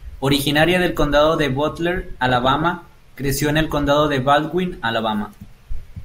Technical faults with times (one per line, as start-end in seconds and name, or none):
2.25-2.67 DAB burbling